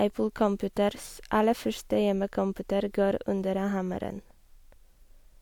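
No technical faults are audible.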